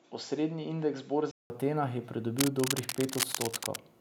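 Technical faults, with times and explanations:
0.0–1.5 s, input switched to a poorer device: the speech starts out dull and narrow, with nothing above 7.6 kHz and a faint extra hiss well below it, then clears up after a gap of about 190 ms. A likely change of microphone or headset profile, with level about the same.
2.38–3.76 s, cable scratch noise: dense, uneven scratching and rustling sits over the speech, only a little quieter than it. That ragged texture is what you get when contact resistance jumps around, most likely from a worn cable or connector being moved.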